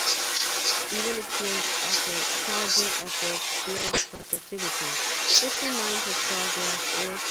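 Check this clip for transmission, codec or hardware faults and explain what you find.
Three faults are audible in this speech clip.

Throughout, an echo leak returns the voice about 0.39 s late. The far end's echo canceller is likely passing loudspeaker sound back.

From 3.77 to 4.38 s, repeated packet loss sounds robotic. Several holes, up to 40 ms each, get patched by stretching earlier sound, about a quarter of the span.

At 5.54 s, short concealed packet loss leaves a brief smear. A 20 ms hole was filled by continuing the preceding sound before blending back.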